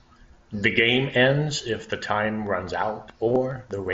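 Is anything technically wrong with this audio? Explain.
Yes. Concealed Bluetooth headset packet loss occurs at 1.80 s, where a 7.5 ms gap is filled by repeating the best-matching recent waveform, making it nearly inaudible. At 3.28–3.36 s, 37.5 ms of audio is lost across a 75 ms stretch. The longest run is 22.5 ms, which comes through as a brief buzzy hold and a slight warble when real audio resumes. These gaps sit on the mSBC wideband headset link.

A train of clicks runs from 2.47 s to the end. About seven similar pulses arrive at a regular 4.8 per second, peaking at roughly signal level. The pattern points to likely interference from nearby equipment or a faulty connection or power supply, and it is heard as steady ticking over the speech and in its pauses.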